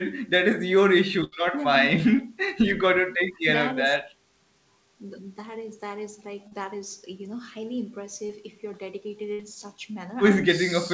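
At 1.24 to 1.34 s a burst of packet loss drops about 80 ms of speech. The receiver stretches the last sound and fades it, so a held buzz or dimming hiss bridges the gap before speech resumes with that stretch gone. At 6.48 to 6.53 s and again at 8.27 to 8.31 s, short concealed packet loss removes about 40 ms and then 20 ms. The decoder patches each hole from the preceding sound and blends back, leaving a brief smear or wobble. At 9.33 to 9.41 s a second burst of packet loss loses about 60 ms, heard as the same fading extension and a jump forward. The call path's wideband codec, which fits G.722 at 64 kbps, leaves nothing above 8 kHz.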